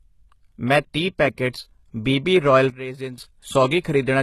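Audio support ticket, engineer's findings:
Codec damage, whole clip, plainly audible: no content above 12.3 kHz; treble sounds gritty and metallic, s sounds lispy. Likely HE-AAC at a low bitrate, consistent with 16 kbps. Spectral band replication rebuilds the treble from lower bands, so harmonics misalign.

Sudden gain jump, 2.7 to 3.18 s: speech and background noise drop together by about 12 dB, then return. Level switches between adjacent samples with no ramp, likely a gain setting or bit shift applied instantly in the digital path.

Pre-echo, 3.80 to 3.85 s: short hiss spreading 42 ms ahead of a sharp attack, which sounds softened and smeared. Transform codec spreads quantisation noise across the block, so noise sized for the loud onset fills the quiet gap before it.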